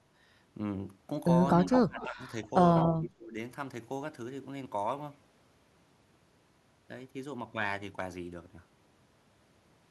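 From 1.56 to 2.23 s the speech sinks by something like 25 dB and goes thin and patchy for most of that stretch. That's speech suppressed in double talk: both ends were likely talking at once, and the echo canceller, unable to tell this talker from its own loudspeaker echo, clamped down on everything. Sitting inside that dip, from 2.0 to 2.05 s, is a quick echo leak, a faint scrap of delayed voice roughly 20 dB under the speech, arriving 193 ms late.

A second echo leak runs from 2.76 to 2.93 s. This one is louder, only about 10 dB below the speech, with the copy again arriving 193 ms late. The likely cause is one side on speakerphone whose canceller let part of its microphone pickup slip back down the line.

Right after, from 2.93 to 3.37 s, the speech is suppressed in double talk again, dropping by about 30 dB, the deepest cut in the clip. It's likely the same tug-of-war, with overlapping talk pushing the canceller to turn both sides down together.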